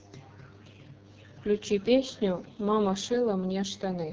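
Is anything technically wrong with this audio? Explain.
Yes. Throughout the speech, the signal has gone through the AMR wideband (HD Voice) codec at a very low rate. It models the voice with pulses and substitutes synthetic noise near the top, leaving nothing above 7.3 kHz, so the speech sounds heavily rough and raspy, which points to about 6.6 kbit/s.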